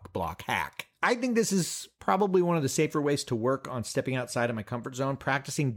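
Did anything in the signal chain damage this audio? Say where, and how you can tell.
No, nothing in this speech recording points to damage at any stage of the chain.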